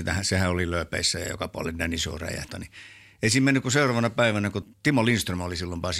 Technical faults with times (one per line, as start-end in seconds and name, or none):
2.49 damaged data in a compressed stream
4.62 damaged data in a compressed stream